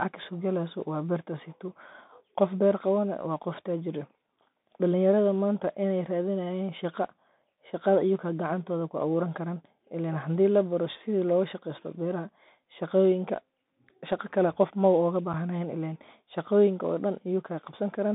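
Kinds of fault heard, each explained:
Bluetooth CVSD headset codec: The speech runs through the narrowband headset codec for the whole clip. The line band sits at about 150 Hz to 3.7 kHz, so the top end is gone. Sibilants sound scratchy, loud bright sounds distort, and a granular hiss sits underneath.
Unconcealed Bluetooth headset packet loss: At 15.33 s a gap of about 7.5 ms cuts into the speech. It has abrupt edges rather than a fade. The length fits roughly two lost headset packets, with nothing filled in to cover them.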